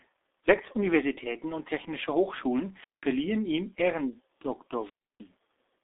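G.723.1 codec damage runs through the whole clip. The speech is confined to roughly 250 Hz to 3.6 kHz, with nothing above 3.8 kHz. Its coarse, slowly updated voice model leaves it muffled and hoarse with smeared consonants, which fits a coder near 6 kbit/s.

Wireless microphone squelch dropouts occur at 2.75 to 3.10 s and 4.77 to 5.29 s. Each time, the radio signal fades and hiss rises, then the receiver's squelch mutes the output, for 188 ms and then 312 ms, before the speech returns.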